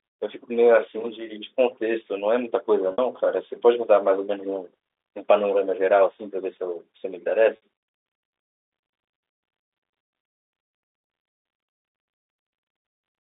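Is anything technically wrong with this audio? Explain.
Yes, two kinds of fault are audible.

From 0.73 to 1.49 s there is loudspeaker feedback squeal. The microphone is picking up its own loudspeaker, and at 4.5 kHz the loop gain exceeds unity. That tone swells over roughly half a second into a piercing whistle about 5 dB above the speech before it stops.

Packet loss with pitch repetition occurs at 2.92 to 2.98 s and again at 7.56 to 7.60 s. In each case about 60 ms of audio is missing, which fits three lost 20 ms packets. The receiver fills the gap by repeating the last pitch period, so the sound briefly holds on a buzzy, sustained note before the speech resumes.

Underneath both faults, the G.711 mu-law telephone coding is audible as the narrow 300 to 3600 Hz line band.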